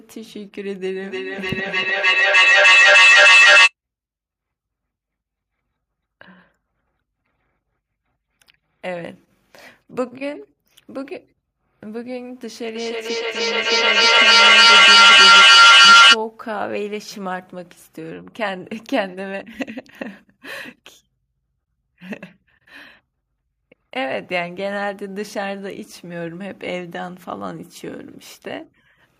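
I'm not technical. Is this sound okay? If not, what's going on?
No. Two devices on the same call in one room kept feeding each other's output back in, causing feedback howl from 1.03 to 3.74 s (a high whistle near 3 kHz) and 12.75 to 16.21 s (lower, near 1.5 kHz), each swelling far above the speech and pulsing roughly three times a second.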